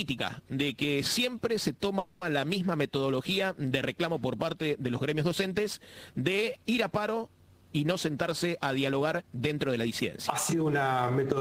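From 1.99 to 2.24 s the sound stops progressing and the last instant is carried on as a fading buzz for about 220 ms, a call audio freeze. The likely cause is delayed packets draining the jitter buffer, with the receiver extending what it last had until data resumed. Playback then continues exactly where it left off, so nothing is lost, but the stream now runs about 220 ms later than before.

Between 8.24 and 9.86 s a jitter buffer speed-up follows. The receiver, holding more audio than its target, repeatedly cuts out short pitch-period-length slices, running the sound at 108% of normal speed with pitch unchanged and trimming roughly 150 ms. A second speed-up from 10.54 s to the end at 11.4 s runs at 111% and removes about another 100 ms, giving a noticeably hurried feel.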